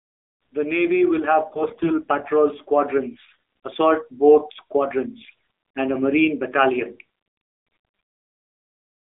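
AMR narrowband mobile codec damage runs through the whole speech clip. The audio sits in a phone-line band of roughly 300 Hz to 3.6 kHz, with nothing reaching the upper range. Each 20 ms frame is rebuilt from a vocal-tract model fed by a handful of pulses, and at this low rate the voice comes out plainly buzzy and synthetic. The degree of coarseness fits AMR-NB's 7.4 kbps mode.

AMR bit errors strike at 1.50–1.94 s, 3.14–3.34 s, 5.24–5.34 s and 7.66–8.18 s. The bursts sound like a weak radio link corrupting the less protected bits of each frame while the checksum on the critical bits still passes. The errors hit around a tenth of bits in most bursts and somewhat fewer in the first. Excitation pulses land in the wrong positions and the fine gain and spectral values drift. Pitch and loudness hold roughly steady, but the voice turns hoarse, scratchy and gargling.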